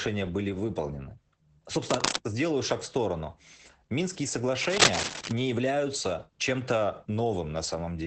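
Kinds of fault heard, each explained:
Opus voice compression: The whole clip has been through a low-rate speech coder. The band stops near 8 kHz, which points to wideband SILK-mode Opus at roughly 12 kbps, and the coarsely coded excitation makes the speech plainly muffled, hoarse and a little robotic. Unlike plain low-pass filtering, which only dulls the top end, this also roughens the texture of the voice itself and runs steadily from start to finish.
cable scratch noise: Two bursts of dense, uneven scratching and rustling sit over the speech, from 1.87 to 2.16 s and from 4.63 to 5.32 s. The first is about as loud as the speech and the second a little louder. The likely cause is a worn cable or connector being moved, so that its contact resistance jumps about. It differs from clicks or dropouts because it is a ragged stretch of noise rather than isolated ticks or gaps.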